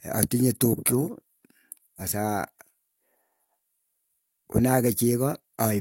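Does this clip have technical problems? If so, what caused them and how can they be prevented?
Yes. At about 1.95 to 2.01 s the speech suddenly jumps forward; roughly 300 ms of audio is gone. This is compressed frames being skipped. The decoder dropped whole frames, either missing from the file or rejected as corrupt, which fits around seven frames of 46.4 ms each. Verifying file integrity after transfer and storing or streaming with error protection prevents this.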